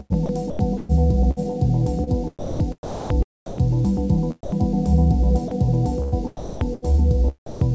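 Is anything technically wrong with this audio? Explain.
Yes, there are two related faults, both from the sender's voice detector.

Sound chopped by the voice detector at 0.13–2.10 s, 2.39–4.17 s and 6.02–6.94 s: the detector likely kept switching transmission on and off, replacing about 0.33 s, 0.6 s and 0.43 s of quiet detail with comfort noise. The sound turns choppy.

Sound dropped by the voice detector at 4.43–4.52 s, 5.48–5.51 s and 7.46–7.61 s: quiet passages were likely misjudged as background, so transmission stopped. Brief stretches of 90 ms, 30 ms and 150 ms give way to steady comfort noise before the sound returns. All of this reaches the listener through a call path whose G.722 codec leaves nothing above 8 kHz.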